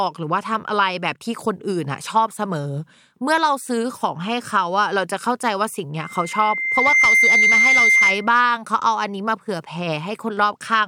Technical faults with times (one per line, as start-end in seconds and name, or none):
5.97-8.31 loudspeaker feedback squeal